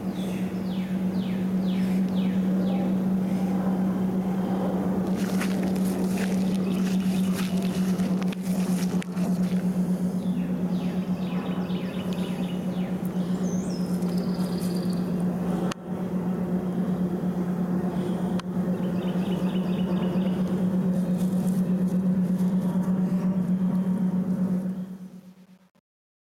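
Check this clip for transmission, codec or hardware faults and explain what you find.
Two faults turn up, one running the whole way through and one on the tail.

Gain pumping runs throughout. The level is pulled down by roughly 10 dB under each loud sound, bringing loud and soft parts closer together and leaving everything squashed. The likely cause is input gain set far too hot, with a fast limiter clamping down on every peak.

Truncation distortion on a fade starts at 24.47 s and lasts to the end at 26.35 s. The fade-out begins around 24.5 s, and from 24.67 s the quiet tail turns gritty. That fits an undithered stage keeping only about 9 bits, so the waveform collapses into coarse steps near the bottom.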